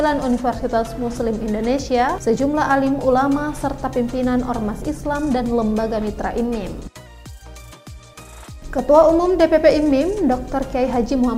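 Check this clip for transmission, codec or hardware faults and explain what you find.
Two faults stand out. A drift correction step slows the sound by 5.7%, about a semitone flat, from 0.55 to 1.15 s, then speeds it 5.7%, about a semitone sharp, from 6.38 to 7.07 s. Both likely come from clock-matching rate jumps, and the abrupt switch and snap-back set them apart from gradual wow.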